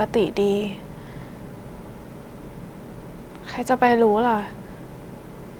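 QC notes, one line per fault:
3.87–3.89 s, lost packet rebuilt from error correction: there's no dropout here, but for about 20 ms the speech turns briefly rougher and grainier before snapping back to normal. That fits a single lost packet whose audio was rebuilt from the low-bitrate backup copy carried in the next packet. The decoder played the coarse copy instead of leaving a gap, so you hear a short, noisy patch rather than silence.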